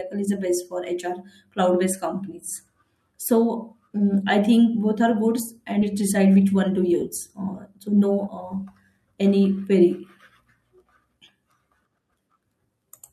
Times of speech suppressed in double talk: none

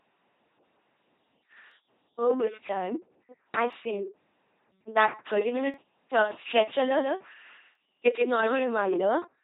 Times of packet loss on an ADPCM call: none

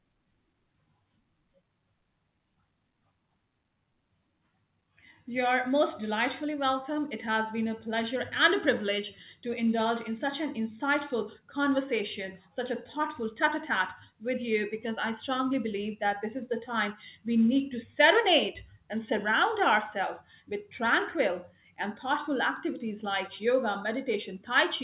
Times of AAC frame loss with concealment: none

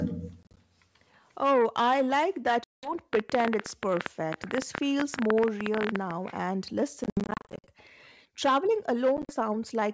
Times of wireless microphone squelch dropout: none

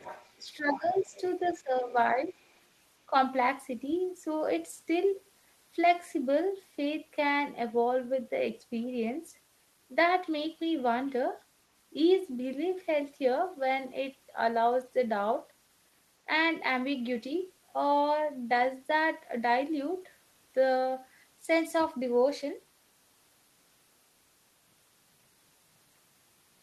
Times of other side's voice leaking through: 0.00-0.33, 0.88-1.49, 1.89-1.94, 2.42-2.63

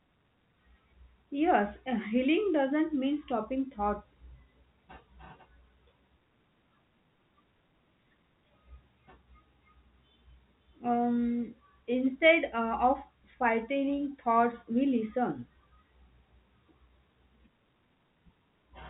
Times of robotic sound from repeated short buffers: none

